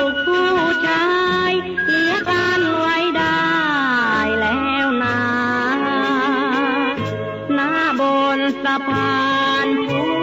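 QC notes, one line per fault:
No fault was found anywhere in this clip. There is nothing to log for any point in the audio.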